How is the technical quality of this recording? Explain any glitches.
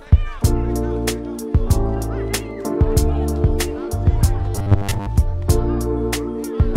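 One glitch stands out: robotic sound from repeated short buffers, from 4.56 to 5.09 s. A rigid, metallic buzz at 100 Hz overrides most of that stretch. Audio likely arrived too slowly, so the playback looped roughly 10 ms fragments, imposing a buzz at one over that length.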